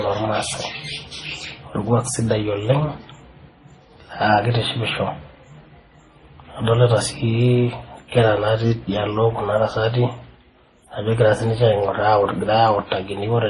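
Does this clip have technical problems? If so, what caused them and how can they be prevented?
Yes. Throughout the speech, nothing is heard above 11.3 kHz, and two different kinds of coding damage sit together: a smeared, watery texture alongside a second layer of swirling, blurred detail. This points to transcoding between lossy codecs, likely a low-bitrate MP3 re-encoded as Vorbis at a similarly low rate. The second encoder wasted bits reproducing the first one's artefacts, added its own, and kept the band limit. To prevent this, encode once from an uncompressed or lossless source.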